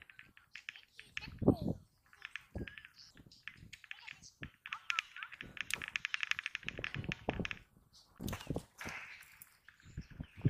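A sharp click sounds at 3.20 s, another at 7.03 s and a third at 9.69 s. Each is a single brief tick with a thin vertical line across the spectrum. The likely cause is dropped samples. Less than a millisecond of audio goes missing each time. The waveform jumps from one value straight to a later one, and that step makes the click. The gap is far too short to remove any audible sound.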